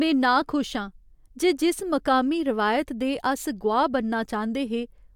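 No technical faults can be heard anywhere in this recording. Nothing interrupts or disturbs the speech at any point.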